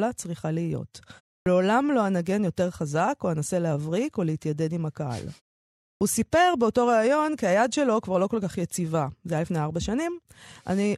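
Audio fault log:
1.42 s and 5.97 s, clipped start after a pause: after pauses of 0.3 s and 0.64 s, the sleeping output wakes late and swallows about 42 ms and 39 ms of onset. The waveform jumps abruptly from flat silence.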